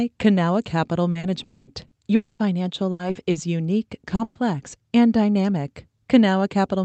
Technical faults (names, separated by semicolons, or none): repeated packet loss (robotic sound); long network dropout